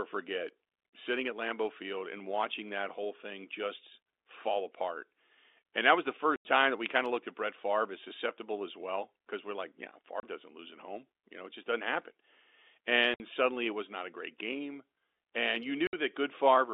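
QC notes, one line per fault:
6.36 to 15.93 s, packet loss filled with silence: four dropouts cut the speech at 6.36 s (90 ms, between "that was the" and "time that we kind"), 10.2 s (30 ms, after "because we're like yeah", before "doesn't lose at home"), 13.14 s (60 ms, before "suddenly it was not") and 15.87 s (60 ms). Each gap is a multiple of 30 ms, which points to lost 30 ms packets that the receiver replaced with digital silence. The abrupt cut-off and restart of the waveform give each gap hard edges, heard over the narrow telephone band of the G.711 line.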